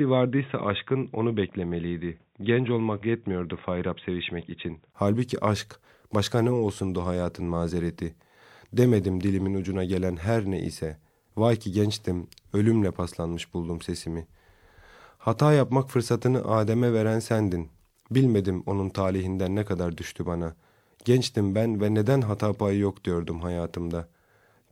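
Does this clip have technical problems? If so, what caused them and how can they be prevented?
Yes. From 0.0 to 4.94 s the speech is dull and boxy, with nothing above 3.8 kHz. At 4.94 s there is a 20 ms gap, and then the full band returns. The level barely changes, and a faint new noise floor sits far below the speech. This points to an input switched to a poorer device. The system likely took sound from a narrowband microphone or a headset call profile before moving to the proper input. To prevent it, lock the recording input before starting and disable automatic device switching.

There is a short glitch from 6.77 to 6.82 s, just after "aşk başka ne", and another from 10.71 to 10.76 s, just after "ucuna gelen her ne". Each lasts about 50 ms, roughly one frame, and peaks near -25 and -30 dBFS. These are corrupt frames decoded. Flipped bits in a compressed frame made the decoder place energy at wrong frequencies. 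To prevent it, use error-checked transport so the decoder conceals damaged frames instead of playing them.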